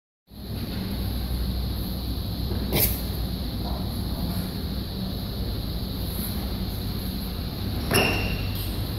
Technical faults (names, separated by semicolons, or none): none